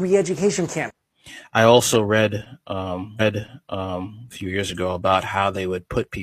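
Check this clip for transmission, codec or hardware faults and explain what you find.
Two transmission faults are present in this speech clip.

From 3.16 to 4.18 s, a stream segment repeated: the player queued the same chunk twice, so about 1.02 s replays after a blip, visible as duplicated waveform and spectrogram patterns.

At 4.41 s, a bit error spike: one flipped bit throws a single sample far off and back, heard as a sharp tick and seen as a thin full-band vertical line.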